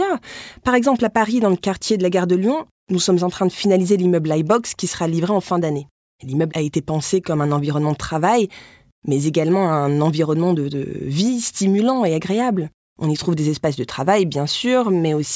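No technical faults can be heard anywhere in the recording.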